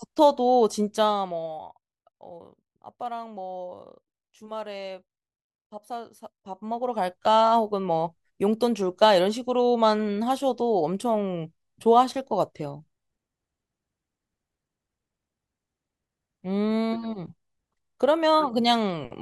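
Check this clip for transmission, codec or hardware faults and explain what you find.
Zipper noise appears twice in the speech: from 0.82 to 1.82 s as the level falls by roughly 15 dB, and from 6.24 to 7.36 s as it rises by roughly the same amount. The gain is being updated in unsmoothed jumps, around fifty a second, rather than as a continuous ramp. Each jump puts a tiny click into the waveform, so while the level moves, a fine buzzing tick rides on top of the speech.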